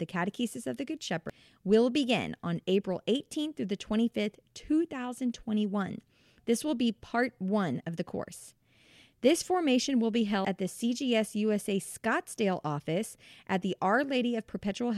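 At 1.30 s, just before "will begin on", and at 10.45 s, between "formation will be" and "at the", the speech breaks briefly from damaged data in a compressed stream. The decoder misreads the corrupted frames and loses sync, which shows as a thin broadband vertical streak and a sharp waveform glitch.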